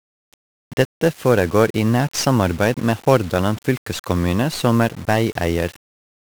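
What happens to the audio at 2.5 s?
At 2.5 s the speech carries the same heavy 1-bit DFPWM compression damage heard across the whole clip. Each sample is a single bit nudging an adaptive level up or down, so strong broadband quantisation noise makes everything fuzzy and crackly, with treble buried in hiss. The damage fits a rate around 48 kbps.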